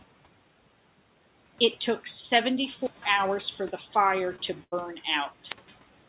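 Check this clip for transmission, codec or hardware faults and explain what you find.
Three kinds of fault can be heard in this speech, heard through a band that stops at 4 kHz, which fits G.711 A-law telephone coding, above a faint room background about 23 dB down.

Wireless microphone squelch dropout, 2.78 to 3.11 s and 5.39 to 5.79 s. The analogue radio link weakens, the hiss swells, and the receiver's squelch shuts the output off for about 156 ms and 162 ms, before the speech returns, the first time on "for the". Rising static before a near silence separates it from packet loss, where the gap is filled rather than muted.

Short concealed packet loss, 4.36 to 4.40 s. About 20 ms of audio never arrived in time, and the decoder extended the preceding sound for about 16 ms before crossfading into the real signal. The result is a brief smear or wobble with no hiss build-up and no silent hole, which marks it as a network gap rather than a radio fade.

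Burst of packet loss, 4.64 to 4.74 s. About 80 ms went missing in a row, so the receiver kept synthesising the last sound for about 81 ms while fading it down. This is heard as a held buzz or fading hiss, after which the speech resumes further on with that stretch skipped. It is longer than the single concealed loss, and unlike the squelch dropouts it contains no static and no muted hole.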